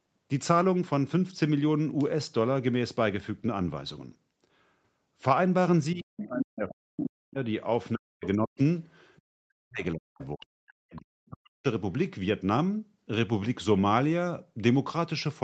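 A speech clip carried over a call path, with nothing above 8 kHz. The main fault is speech suppressed in double talk. The talker's level collapses three times: 5.94 to 7.38 s, 7.94 to 8.6 s, and 9.3 to 11.66 s. At its deepest the voice falls by roughly 40 dB. The likely cause is an echo canceller that could not tell the talker from the loudspeaker echo while both sides spoke, so it turned everything down. The second fault is the other side's voice leaking through. A second voice appears at 6.19 to 6.74 s, about 10 dB below the talker. Shorter scraps come at 8.24 to 8.28 s and 9.16 to 9.22 s, the latter very faint. A longer stretch runs from 10.21 to 11.01 s, around 25 dB down. This is likely loudspeaker playback that the echo canceller failed to fully remove from the microphone.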